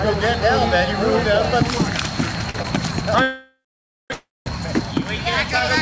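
Throughout the clip there is gain pumping: the input gain is likely set far too high, so a fast limiter keeps clamping down on loud sounds. The gain swings by about 5 dB, leaving the dynamics squashed.

At 2.50 to 2.56 s and again at 2.62 to 2.66 s come two short stalls from a late packet. Each time, the jitter buffer ran dry, so the receiver held the last sound for 45 ms and then 20 ms before carrying on from the same point. Nothing is lost, but the sound briefly hangs with a slight buzz or dip.

From 3.22 to 4.12 s there is a call audio freeze, likely from packets held up in transit. The receiver extends the last sound as a fading buzz or hiss, and about 550 ms of the 876 ms wait is silence. A second freeze follows from 4.14 to 4.48 s, lasting 321 ms with about 220 ms silent. Both times the audio resumes where it stopped, inserting a gap rather than dropping anything. Through the call codec path, nothing above 8 kHz comes through, which fits G.722.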